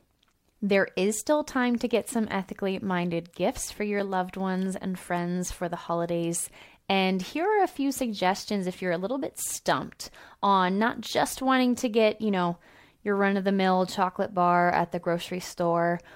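A speech clip with one decoding fault: a corrupt frame decoded at 4.00 s, between "ethically minded gifts for" and "loved ones and friends". Damaged bits in a few compressed frames were played anyway, misplacing energy in frequency and producing a brief glitch peaking around -15 dBFS.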